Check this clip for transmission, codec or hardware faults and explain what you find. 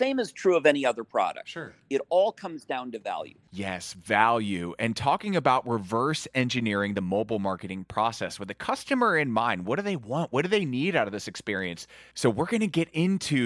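Nothing turned up here: the speech comes across steady and intact, with no dropouts, glitches or distortion to point at.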